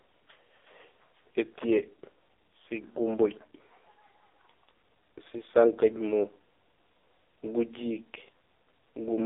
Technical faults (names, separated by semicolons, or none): AMR narrowband mobile codec